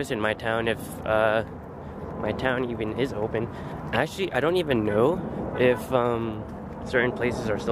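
No dropouts, clicks, distortion, level jumps or timing errors occur anywhere in the audio.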